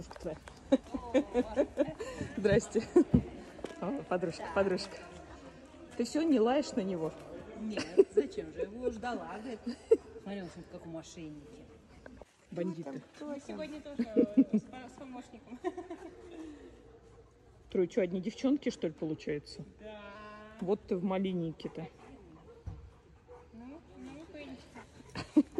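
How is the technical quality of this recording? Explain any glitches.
One timing fault stands out: a drift correction step from 19.05 to 20.15 s. For about 1.1 s the audio plays 5.75% slow and drops 102 cents, roughly a semitone flat. The likely cause is clock-matching software changing the playback rate in a single step to refill or drain its buffer. Speed and pitch move together, so the passage sounds both slowed and detuned.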